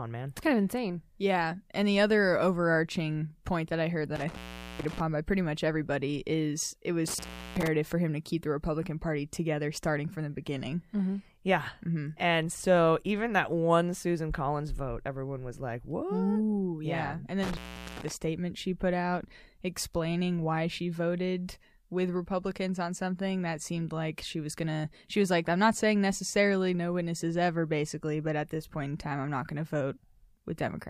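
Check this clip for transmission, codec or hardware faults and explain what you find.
The speech has one recurring hardware fault. Intermittent contact occurs at 4.15 to 5.00 s, after "point that I heard"; at 7.08 to 7.67 s, after "everybody is it was"; and at 17.43 to 18.11 s, before "statement she put out". Each time, a loose plug or cable briefly breaks the signal path for about 0.38 to 0.43 s. The sound drops out with crackle at both edges, leaving faint hiss until the connection returns.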